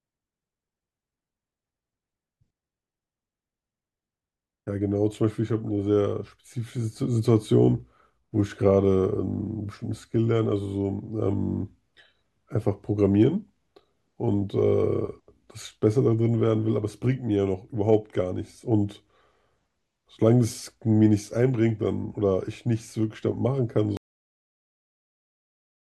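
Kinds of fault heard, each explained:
Cut-off end: the speech stops dead at 23.97 s, partway through a sound, and the rest of the clip, to about 26 s, is pure digital silence. The final stretch of audio was never written out, so there is no natural tail. What separates this from a fade or a normal pause is the abruptness: no decay, no room tail, just an instant drop to silence while the sound is still under way.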